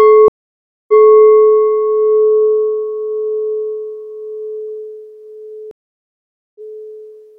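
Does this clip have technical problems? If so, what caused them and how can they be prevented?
Yes. There are two stream reconnects. At 0.28 s the sound drops out for 0.6 s and resumes about 0.23 s earlier than where it stopped, ending at 1.11 s. At 5.71 s a 0.84 s gap follows, again resuming 0.23 s back, through 6.78 s. Each time the connection failed, playback went silent, and a fresh decoder joined mid-stream on a server burst that replayed already-heard audio. Prevent this with a larger network buffer and resumption by byte or sequence offset, so the player can skip the replayed portion.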